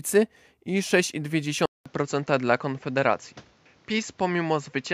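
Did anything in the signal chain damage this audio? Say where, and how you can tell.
Yes. At 1.66 s the speech cuts out for about 200 ms, then returns duller and boxier until the end, with nothing above 7.6 kHz and a new, different background hiss sitting roughly 30 dB below the signal. The loudness barely changes. That points to the input being switched to a poorer device at the driver stage, likely a different microphone. A codec bandwidth drop wouldn't bring a gap or a changed noise floor.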